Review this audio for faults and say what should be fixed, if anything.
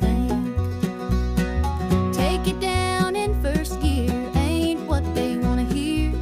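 No faults found and nothing needs fixing.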